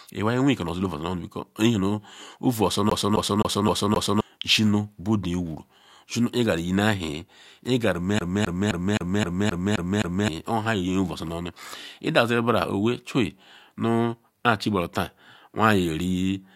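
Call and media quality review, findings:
CD stuck on one turn, 2.90–4.21 s: the same 0.26 s slice of speech repeats 5 times, each with a brief mute at the jump. Even, rapid stutter.

CD stuck on one turn, 8.19–10.28 s: same 0.26 s loop, 8 repeats. Probable component: disc surface and laser tracking. A scratch knocks the pickup back one track at the same point on every rotation.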